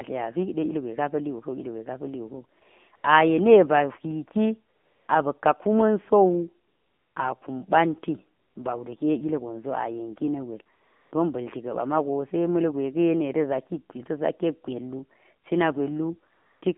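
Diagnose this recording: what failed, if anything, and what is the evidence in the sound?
The speech sounds buzzy and synthetic throughout, with the plainly audible texture of a low-rate mobile call, and the band is confined to roughly 200 Hz to 3.6 kHz with nothing above. The fault is in the codec stage: the AMR narrowband mobile codec, whose coarse vocal-tract model and sparse pulse excitation strip fine detail. The degree of damage fits AMR-NB running at its 7.4 kbps mode.

Brief patches of smooth, steady hiss replace the real background at 2.6 s, 2.96–3.04 s, 4.76–5.08 s, 6.68–7.16 s, 8.40–8.56 s, 10.76–11.12 s and 16.34–16.62 s. They last from 20 to 480 ms and switch in and out abruptly. This is AMR comfort noise from the call-processing stage. The sender judged those moments silent and stopped sending speech frames, so the receiver synthesised noise from a rough level-and-spectrum description.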